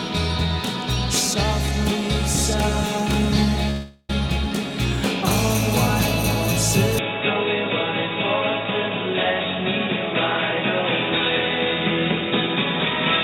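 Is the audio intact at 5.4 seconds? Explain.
Yes, at 5.4 seconds the audio is intact, with no dropout, click, distortion or other fault at that moment.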